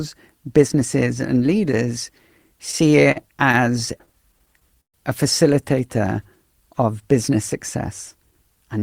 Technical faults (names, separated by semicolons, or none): repeated stalls (stutter); jitter buffer speed-up